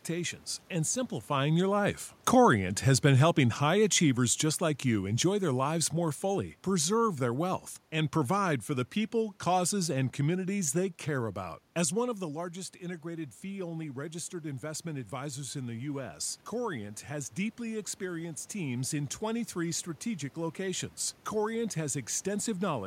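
At 1.3 s, just after the talker moves at about 1 s, the automatic gain falls in response. Over the next four and a half seconds, to 5.85 s, the level sinks by about 6 dB. The room noise drops with it, which shows the system's gain at work rather than the talker. On a waveform the envelope tapers steadily, and on a spectrogram the background floor dims across all frequencies at once.

From 12.19 s to 18.49 s the automatic gain rises. Just before, around 12 s, the talker seems to move away, and the input drops by about 10 dB. The control then raises its gain by about 6 dB over more than six seconds, so speech and room noise swell back together without fully returning to their earlier level. A waveform shows the envelope slowly widening, and a spectrogram shows the noise floor between phrases brightening in step with the speech.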